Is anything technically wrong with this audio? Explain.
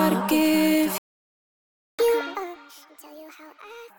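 Yes. From 0.98 s to 1.99 s there is a playback stall: the player likely ran short of data or had its output thread held up, so for about one second the output simply goes silent, cutting the sound off mid-flow before it resumes.

From 1.99 s to 3.9 s the player performs a catch-up at higher speed, resampling its backlog to play 1.5 times faster to recover the lost second. Everything sounds hurried and raised in pitch by roughly seven semitones until 3.9 s.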